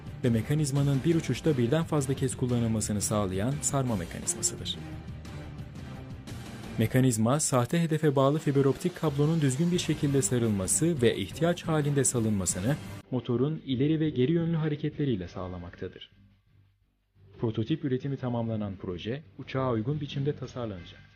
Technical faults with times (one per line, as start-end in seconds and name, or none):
none